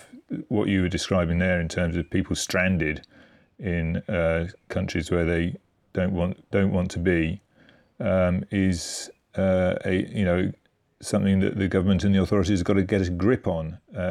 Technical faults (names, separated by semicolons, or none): none